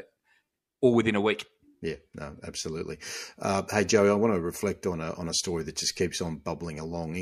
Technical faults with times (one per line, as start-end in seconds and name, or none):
none